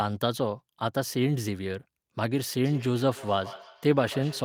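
From 2.65 s to the end of the clip at 4.44 s, there is feedback echo between two devices. Each stretch of speech returns at a steady interval of roughly 150 ms. At their loudest, the repeats sit about 16 dB below the speech. The cause is a loop. A second device in the same room plays the call aloud, and a nearby microphone picks it up again. That device's echo canceller only removes its own playback, so this sound passes through.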